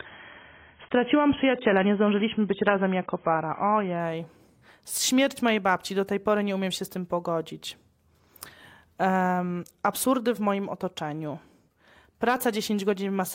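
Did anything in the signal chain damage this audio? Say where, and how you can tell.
Yes. An adaptive stream starting at a low bitrate damages the first 4.0 s of this speech: nothing is heard above about 3.7 kHz, and codec artefacts are stronger. The cause is the player opening on a cheap rendition, which fits roughly 16 kbit/s AAC, before stepping up without a gap to a fuller one, consistent with about 96 kbit/s.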